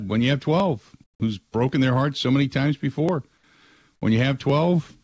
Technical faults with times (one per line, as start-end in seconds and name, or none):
0.60 dropped samples
1.04-1.20 comfort noise in place of the background
3.09 dropped samples
4.50 dropped samples